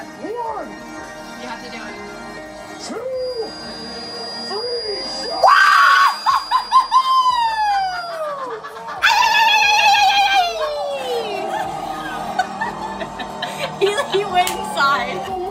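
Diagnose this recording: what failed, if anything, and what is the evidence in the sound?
A feedback whistle runs under the sound from 3.10 s to 8.22 s. It is a thin, steady tone at 4.8 kHz, about 15 dB below the programme, that swells and fades slowly in level. On a spectrogram it shows as one narrow horizontal line at 4.8 kHz across those five seconds, and the waveform barely changes. The stage is the analogue acoustic path, likely a loudspeaker-to-microphone loop held just at the edge of feedback, so one frequency keeps ringing without building up.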